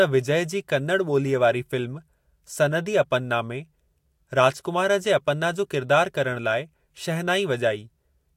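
No technical faults are audible.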